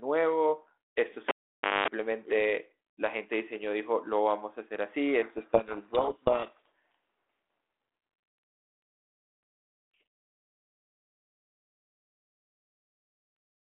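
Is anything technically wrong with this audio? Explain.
Yes, there are two faults in this speech clip.

From 1.29 s to 1.88 s the cable is pulled and plugged in. A pop opens a stretch of about 0.54 s where the signal drops to near silence. Before the second pop brings the sound back, a 50 Hz mains buzz lasts roughly 0.22 s, while only the plug tip touches the socket. That hum burst between two pops distinguishes it from a plain dropout, which would be silence with no buzz.

From 5.22 s to 6.68 s there is a codec payload misread. The receiver unpacks each G.726 code word with its bits in the wrong order, so the decoder keeps producing output from values that are effectively wrong. The speech sinks under harsh, grinding distortion for those 1.46 s and comes back clean once the packing matches again. It differs from ordinary low-bitrate coding noise, because that rasp would follow the speech level throughout the clip instead of switching on and off. 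Outside this stretch, the narrow telephone band of roughly 300 Hz to 3.4 kHz and the light coding grain fit a normally working 32 kbit/s G.726 link.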